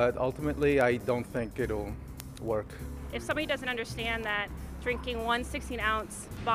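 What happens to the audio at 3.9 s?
The audio at that point sits inside a run of word clock ticks that lasts from 0.16 s to 6.55 s. Sharp ticks of uneven strength recur about ten times per second. The receiving device is running on its own clock rather than being locked to the sender, and the two are off by a few hundred parts per million. Each time they slip past each other, a single sample is dropped or repeated, producing one click.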